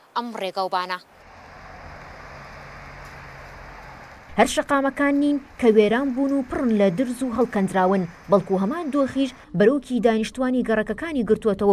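Nothing technically wrong can be heard anywhere in this audio. There is no event that calls for a time or a cause.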